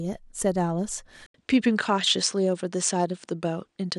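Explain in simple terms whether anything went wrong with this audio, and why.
At 1.26 s the sound changes character and stays that way to the end. There's a brief gap of about 80 ms, then the speech comes back a little duller, with nothing above 9.5 kHz and a faint new background noise, though the loudness barely changes. That pattern points to an input switched to a poorer device, likely the system jumping to a different microphone or a headset's call mode partway through the recording.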